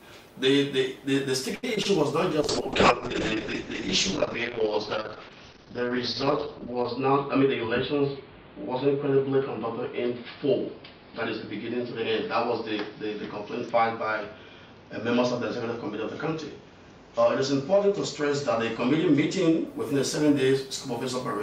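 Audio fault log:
1.55–1.65 s, short stall from a late packet: a packet arrived late, the buffer emptied, and the last sound was stretched for 75 ms before playback resumed where it left off. Nothing is lost, but the waveform shows a held, repeating stretch and the spectrogram shows frozen, smeared harmonics.
1.75–1.78 s and 1.82–1.87 s, short concealed packet loss: 20 ms went missing each time, and the gaps were patched with 15 ms and 23 ms of extrapolated sound that blends back in. On the spectrogram the detail blurs into a brief smudge, and the waveform wobbles in shape.
2.41–19.73 s, call bitrate drop: the encoder fell from 64 to 8 kbps, staying at the lowest rate for about 4.5 s, and the coded bandwidth shrank from 20 kHz to 6 kHz. The sound turns coarse and muffled. The spectrogram shows a flat ceiling near 6 kHz that lifts again by 19.73 s.
7.00–7.48 s, jitter buffer speed-up: the buffer held too much audio, so the receiver repeatedly cut pitch-period pieces, about 40 ms in total, to play at 106% speed with pitch unchanged. 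The sound seems hurried, and on the waveform whole cycles are dropped at each splice while the remaining cycles keep their length.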